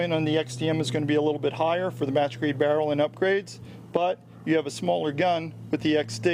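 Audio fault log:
No audible faults detected.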